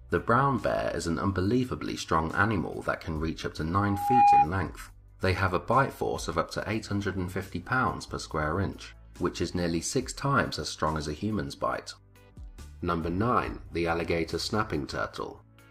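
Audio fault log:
3.79 to 4.49 s, loudspeaker feedback squeal: a pure tone near 814 Hz swells over just under half a second to about 10 dB above the sound, as the microphone-to-speaker loop exceeds unity gain there. A spectrogram shows one bright horizontal line; the waveform swells into a sine.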